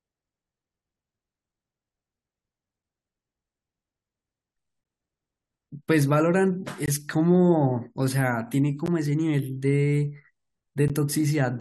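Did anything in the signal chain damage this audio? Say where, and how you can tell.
Yes. There are gaps between stream segments at 4.84 s, 6.86 to 6.88 s, 8.86 s and 10.88 s, at the playback stage where streamed segments are joined. Each is a hard-edged hole of silence, roughly 14 to 20 ms long, recurring every 2 s. That spacing points to segments whose time stamps leave a small interval uncovered, which the player pads with silence. No audio is dropped, and each gap adds time to the sound.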